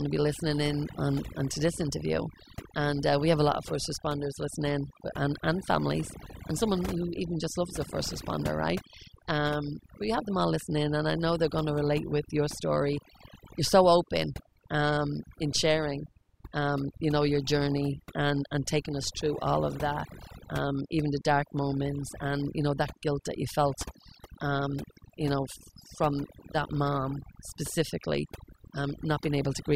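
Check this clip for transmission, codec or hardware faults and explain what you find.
One fault is present. Overdone noise removal runs throughout the speech. An overly aggressive reducer mutes frequency bands near its noise estimate, taking quiet speech detail too, so pauses sparkle with twinkling specks.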